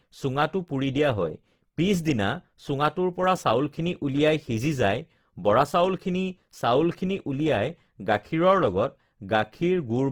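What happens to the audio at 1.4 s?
At 1.4 s, as throughout, the speech sounds grainy and rough. This is likely Opus compression refilling bit-starved bands with noise, which fits a low bitrate.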